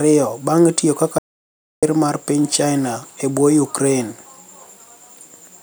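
A speech recording with an audio dropout to silence from 1.19 s to 1.83 s. For about 0.64 s the sound stops dead. There is silence, with no room tone. It likely came from a momentary loss of input. Whatever was said there is gone.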